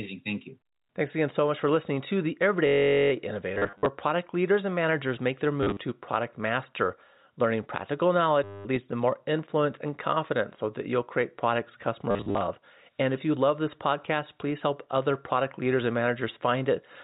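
A steady buzz at about 47 Hz replaces the sound from 2.67 to 3.12 s: one 21.3 ms sliver of audio plays over and over, roughly 21 times, with no variation. This is a system hang loop. The computer or driver stalled while the sound hardware kept replaying the same ring buffer, and a loop that length fits a 1024-sample buffer. Because the buffer is so short, the repeats merge into a drone rather than a stutter.

Robotic stutters follow in four places, all from packet loss with the last packet repeated. From 3.54 to 3.86 s, just before "product leaders and managers", about 190 ms goes missing in scattered gaps, the longest run 50 ms. From 5.63 to 5.79 s about 110 ms is lost, with runs up to 40 ms. From 8.44 to 8.65 s, between "product master learning practical" and "leads to more influence", a solid 210 ms drops out. From 12.11 to 12.41 s, right after "that you'll create products", about 190 ms is lost, with runs up to 40 ms. 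In each case the receiver filled the holes by replaying the previous packet. Those repeats don't line up with the pitch of the sound, so longer runs buzz. The gap pattern points to 10 ms packets, which puts that buzz near 100 Hz. The whole clip passes through G.711 A-law telephone coding, so it is limited to the 4 kHz telephone band.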